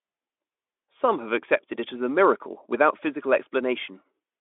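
Nothing goes wrong anywhere in this bit of speech, so there's honestly no fault to point at here.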